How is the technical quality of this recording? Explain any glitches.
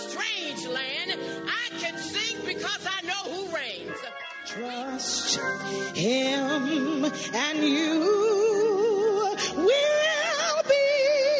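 No audible glitches or faults.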